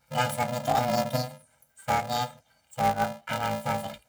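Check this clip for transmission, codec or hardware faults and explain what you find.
One fault runs through the whole speech clip: planar audio read as interleaved. Each short block, about 2.67 ms and consistent with 128-sample blocks, stores all left samples and then all right, but playback takes them as alternating pairs. That chops the speech into a robotic buzz at 375 Hz, with no clear octave shift.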